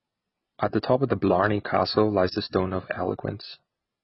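Speech running the whole way through with a dull, smeared sound: nothing reaches above about 5.6 kHz, and the sibilants go fizzy and warbly. That points to heavy AAC compression as the likely cause, with the encoder starving the top end to fit roughly 16 kbps.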